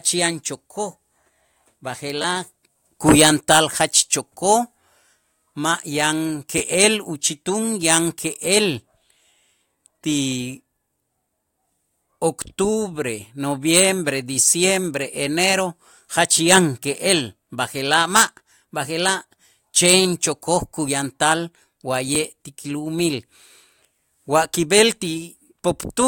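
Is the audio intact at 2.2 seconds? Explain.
No. From 2.22 to 2.24 s there is a repeated buffer: fresh audio failed to arrive in time, so the same roughly 11 ms slice of speech was played twice more, which fits a 512-sample buffer. Each repeat joins hard to the last, so at about 94 repeats per second it comes across as a brief buzz rather than a stutter. Unlike a dropout, the gap is filled with that copied sound, not silence, though about 20 ms of new speech is still lost.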